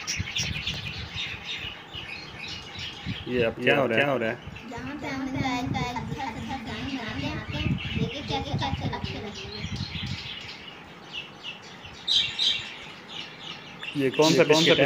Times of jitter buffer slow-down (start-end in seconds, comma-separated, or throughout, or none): none